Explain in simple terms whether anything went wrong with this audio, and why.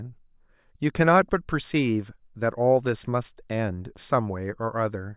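Nothing went wrong here.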